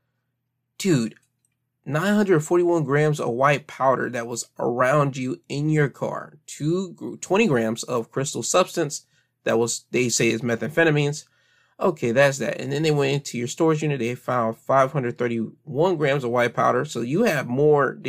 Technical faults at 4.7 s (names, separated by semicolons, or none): none